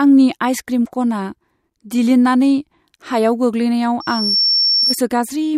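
At 4.00 s a loudspeaker feedback squeal starts in the speech. It is a single tone at 5.5 kHz. It swells over a fraction of a second to about the level of the voice. The microphone is hearing its own loudspeaker. It stops at 5.00 s.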